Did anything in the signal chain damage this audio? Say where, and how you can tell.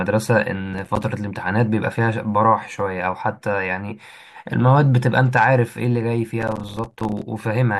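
Yes. Processor overload crackle arises at the driver or buffer stage, at 0.74–1.04 s and again, longer, at 6.41–7.22 s. The processor repeatedly missed short buffers, around 5 ms each, leaving hard-edged silent gaps. The waveform shows clustered short silent notches, and the spectrogram shows dense vertical broadband streaks.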